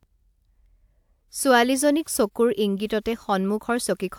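No technical faults can be heard anywhere in the speech recording. Nothing interrupts or disturbs the audio at any point.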